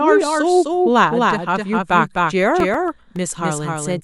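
Doubled audio track runs from start to finish through this speech clip. A second, full-band copy of the same sound trails the original by roughly a third of a second, sitting a few decibels below it, with no reverberant tail or room colouring to soften it. The result is a dry, rhythmic echo stacked on every syllable, most likely from the signal being captured twice, once through a slower path that lands out of step with the first. CD scratch ticks appear between 2.60 and 3.30 s: six short ticks, the longest only a few milliseconds, recurring at a steady rate of several per second. Each marks a spot where a scratch or blemish on the disc wiped out more data than error correction could restore, so the player patched or silenced those samples on each revolution, leaving a regular clicking that comes and goes.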